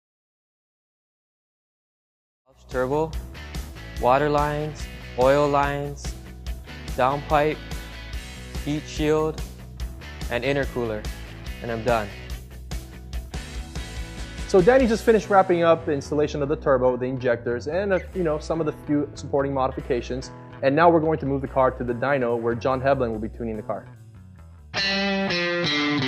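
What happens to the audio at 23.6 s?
Nothing goes wrong at 23.6 s; the audio runs intact through that moment, with no dropout, click or change in level.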